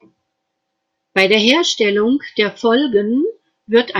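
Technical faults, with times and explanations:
1.18 to 1.52 s and 3.75 to 3.79 s, hard clipping. The speech peaks push past what a stage can pass, by about 2 dB, then about 1 dB. Their tops are sliced flat. This adds high harmonics, heard as brief crackle on the loudest moments.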